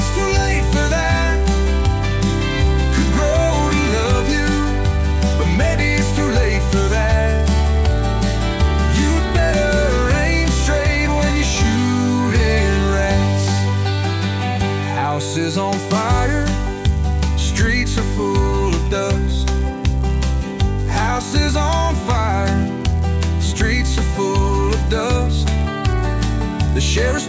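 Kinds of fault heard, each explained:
Resampler restarted on every block: each 10 ms block was converted from 24 kHz to 16 kHz in isolation, leaving edge errors heard as a 100 Hz buzz riding the sound.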